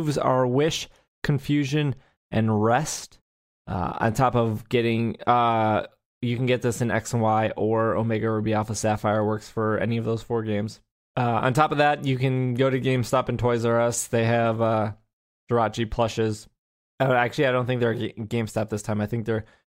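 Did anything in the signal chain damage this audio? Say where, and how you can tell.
No, nothing in this speech recording stood out on listening as damage from any stage of the signal chain.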